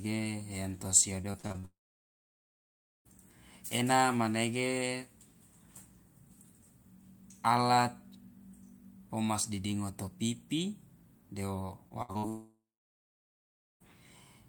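From 1.21 to 1.65 s the speech breaks up with repeated packet loss (robotic sound). Six short holes, the longest 37 ms and about 160 ms in total, are each patched by stretching the preceding sound, so roughly a third of that span is filler. It comes across as choppy. On a spectrogram the harmonics turn into flat, frozen bands that repeat in short blocks, with hard edges where real audio resumes.

Straight after, from 1.65 to 3.07 s, the sound holds briefly as a fading buzz and then drops to silence for about 1.3 s before speech returns with a piece missing. This is most likely a long network dropout. The waveform shows a short decaying tail and then a flat line, and the spectrogram goes blank.

The same pattern comes back later. From 11.89 to 12.25 s there is another robotic stretch with four gaps, the longest 64 ms and about 140 ms in total, so nearly 40 percent of the span is concealed. 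On the spectrogram it shows the same smeared, repeating harmonic blocks. At 12.29 s what is likely a second dropout begins and runs to 13.82 s. The concealment buzz dies away and about 1.2 s of silence follows, visible as an empty gap in both the waveform and the spectrogram.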